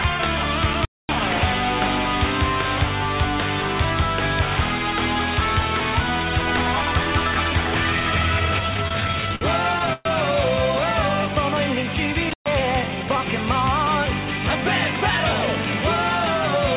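From 0.73 to 1.20 s the sound cuts out and breaks up, with crackle at the edges and only hiss left while it is gone. This is an intermittent contact: a loose cable or plug opened the connection for about 240 ms in total within that span, briefly disconnecting the signal before it made contact again.

Between 8.74 and 9.43 s the audio drags and stutters through nine separate hitches. These are repeated stalls (stutter): packets kept arriving late, so the jitter buffer ran dry again and again. Each time, the receiver stretched the last sound forward until more data came. About 151 ms was filled in this way, the longest wait being 56 ms, and 22% of the span is concealment. No audio is actually lost, only delayed.

At 9.93 to 10.07 s the last sound is held on for about 122 ms, ending in roughly 10 ms of silence, and then the audio resumes exactly where it stopped, with nothing missing. This call audio freeze was likely caused by packets held up in transit, which emptied the jitter buffer so the receiver had to continue the sound until they arrived. 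That adds 122 ms of delay to everything after it.

A second intermittent contact follows at 12.29 to 12.48 s, again a crackly dropout with hiss underneath, this time with the line open for about 123 ms.

From 12.75 to 13.17 s the audio sounds hurried while keeping the same pitch. This is a jitter buffer speed-up: after the delays, the buffer held more audio than it aims for. To catch up, the receiver cut out short pitch-period-sized pieces many times in a row, around 70 ms altogether, so this stretch plays at about 114% speed.

Throughout, nothing is present above 4 kHz, which fits narrowband G.711 mu-law call coding.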